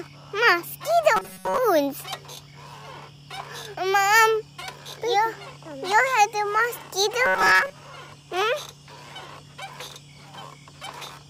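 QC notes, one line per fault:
1.16–1.58 s and 7.26–7.72 s, robotic sound from repeated short buffers: both stretches turn into a stiff, metallic buzz locked at 188 Hz, likely from late-arriving audio being covered by looping a roughly 5.3 ms chunk, which replaces most of the real signal.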